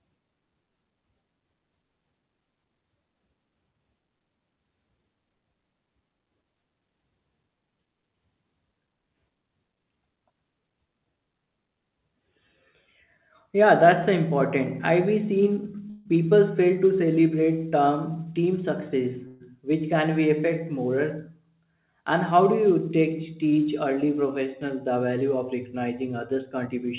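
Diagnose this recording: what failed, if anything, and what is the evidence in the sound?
Call audio freeze at 15.90 to 16.07 s and 19.27 to 19.42 s, in the network and jitter buffer stage. The last sound stretches into a fading buzz for 153 ms and then 132 ms, and the speech resumes where it stopped with nothing lost. Packets held up in transit, which likely emptied the buffer, would produce this.

Jitter buffer speed-up at 18.09 to 19.24 s and 26.67 to 26.85 s, in call processing. The speech runs hurried at unchanged pitch, at 107% and then 119% speed. The receiver is cutting repeated pitch-period slices, roughly a tenth of a second and then about 40 ms in total, to shed excess buffered delay.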